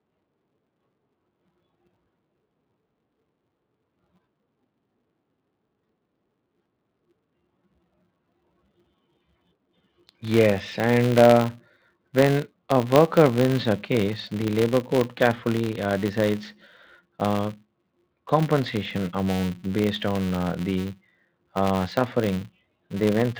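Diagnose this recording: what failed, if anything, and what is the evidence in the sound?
A filter restarted on every block, a fault in the processing stage, runs through the whole speech recording. Under the voice sits a steady buzz at about 188 Hz that rises and falls with the speech level. That rate fits a filter processed in 256-sample blocks whose internal state is cleared each time. Every block starts from silence, so each boundary produces a small transient, and the repeating transients merge into the buzz.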